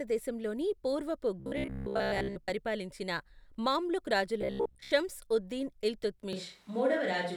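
From 1.40 to 2.51 s, and again from 4.42 to 4.91 s, the speech turns into robotic sound from repeated short buffers: a stiff metallic buzz at 66.7 Hz. Most of the audio in those stretches seems to be repeats of roughly 15 ms snippets, likely because new audio arrived too slowly and playback kept filling the gap.

At 6.33 s, through to the end, there's a sudden switch to a distant microphone. The voice goes hollow and roomy and thinner in the bass, with faint background noise well below the speech. The level barely changes. Likely the close mic's feed dropped out.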